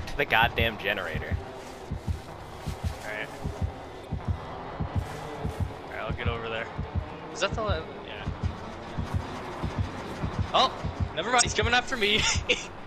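At 4.01–4.06 s and 11.38–11.43 s, damaged data in the compressed stream makes the decoder lose frame sync, producing a brief chirp, squawk, click or short hole lasting about 45 ms each.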